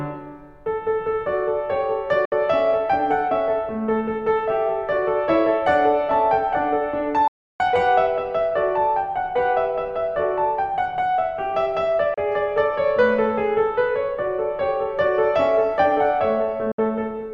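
Music that abruptly goes silent four times: brief holes at 2.25 to 2.32 s, 12.14 to 12.18 s and 16.72 to 16.79 s, and a longer gap of about a third of a second at 7.28 to 7.60 s, each cut with a fast 3 ms fade. This is a digital broadcast dropout. The receiver muted whenever frames failed to arrive intact, and gap lengths of 32, 64 and 320 ms fit losing whole 32 ms frames, so that music is simply gone.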